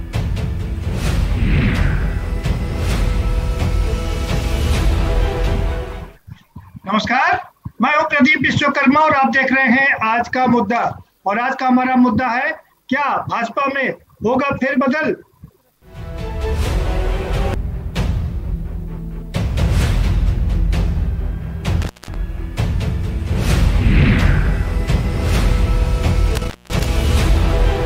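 An intermittent contact, a loose cable or plug briefly losing its connection, breaks the signal path twice. From 21.82 to 22.15 s the line goes open for about 190 ms, and from 26.35 to 26.85 s for about 200 ms. Each time the sound drops out abruptly, with crackle as the contact scrapes open and closed at the edges, and a faint hiss remains during the gap.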